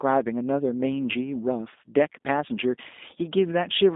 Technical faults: G.729 codec

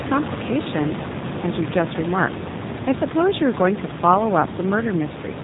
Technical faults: G.729 codec

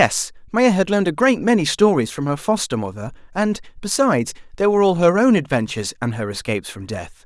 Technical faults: none

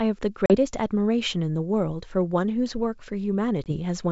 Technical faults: packet loss on an ADPCM call

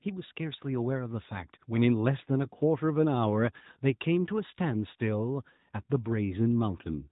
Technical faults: AMR narrowband mobile codec

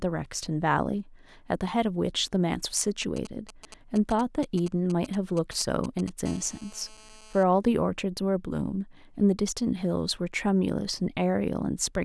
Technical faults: GSM signalling bursts; GSM phone buzz

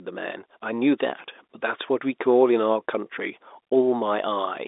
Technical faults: none

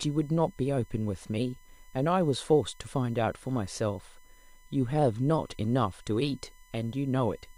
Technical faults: USB whine

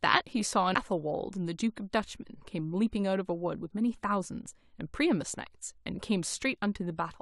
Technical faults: damaged data in a compressed stream

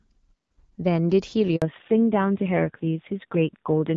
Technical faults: handover gap; fallback to narrowband

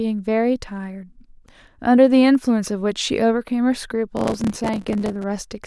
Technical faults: processor overload crackle

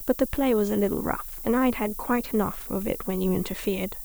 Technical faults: low bit depth with noise shaping

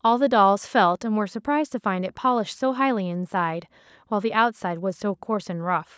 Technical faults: none

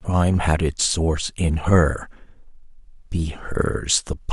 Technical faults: none

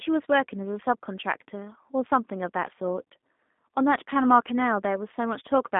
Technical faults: G.729 codec

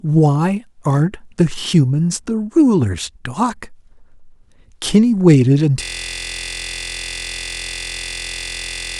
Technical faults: system hang loop

